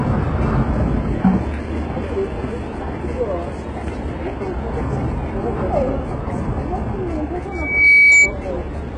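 Throughout, the audio was likely squeezed through HE-AAC compression at a very low rate, about 12 kbps, so synthesized treble ends near 11 kHz and sounds gritty and metallic. From 7.52 to 8.34 s, a microphone caught its own loudspeaker, and the resulting loudspeaker feedback squeal swells at 2.3 kHz over roughly 0.4 seconds to around 10 dB above the sound.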